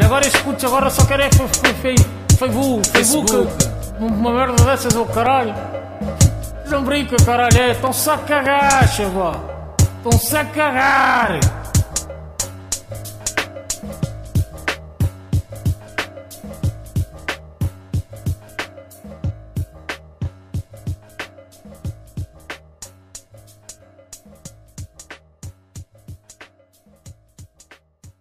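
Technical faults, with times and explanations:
3.79–5.56 s, CD scratch ticks. Seven short ticks arrive at about four per second. Each lasts only a few milliseconds. A blemish on the disc destroys more data than error correction can rebuild, once per rotation, so the player patches or mutes those samples.
7.58–9.34 s, CD scratch ticks. Another seven ticks follow at the same steady rate of about four per second. They are slightly longer here, around four milliseconds at most. The damaged spot passes the laser on each turn, and the concealed gaps become audible clicks.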